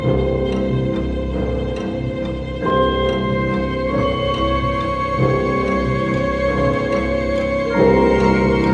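No technical faults can be heard anywhere in the audio.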